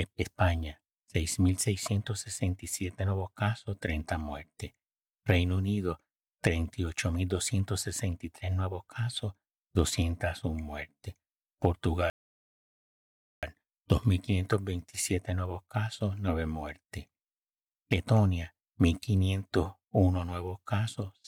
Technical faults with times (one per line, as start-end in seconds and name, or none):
12.10-13.43 rebuffering stall